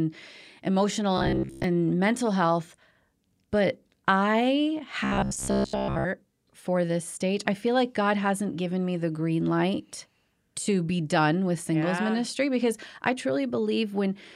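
From 1.18 to 1.64 s, and again from 5.04 to 6.06 s, the speech turns into a rigid, metallic buzz locked at about 66.7 Hz while still roughly tracing the words. This is robotic sound from repeated short buffers, likely caused by audio arriving too seldom, with a roughly 15 ms slice looped to fill each gap. Most of the real audio in those stretches is skipped.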